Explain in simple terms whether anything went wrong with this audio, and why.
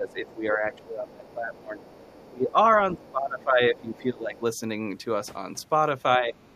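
From the start to 4.37 s, and again briefly from 6.17 to 6.36 s, the talker's voice dips and thins out. That's speech suppressed in double talk, likely because both sides spoke at once and the echo canceller turned everyone down.

Underneath, faintly, you can hear the other side's voice leaking through from 0.09 to 2.25 s, 2.99 to 4.39 s, and again at 6.41 s to the end. It's quiet, likely loudspeaker sound the echo canceller didn't fully remove.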